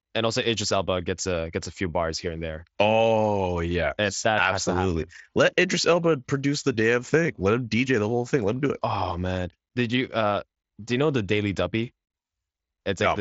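Nothing is technically wrong with this speech clip.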